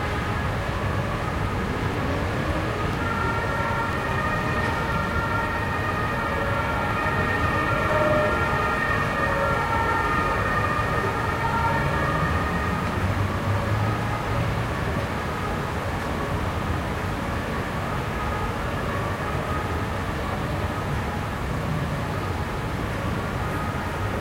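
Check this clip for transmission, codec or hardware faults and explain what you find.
There is one transmission fault. An overlap between stream segments causes tiny skips at 0.94, 1.94, 2.93, 3.93, 4.92, 6.91 and 7.90 s. Overlapping one-second segments get trimmed, so milliseconds vanish and the waveform jumps.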